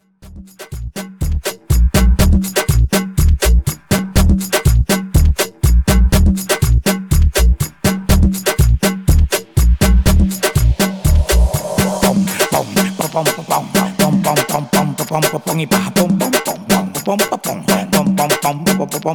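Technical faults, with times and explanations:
3.98 s and 17.28 s, block of digital silence: twice the program likely failed to deliver a block of output in time, and each gap of about 5.3 ms was filled with zeros instead, which fits a 256-sample buffer at 48 kHz. The waveform drops straight to silence and jumps back with no fade, so both edges are sharp discontinuities. The hole is far too short to hear as a gap, so each event comes across as a tick or dip.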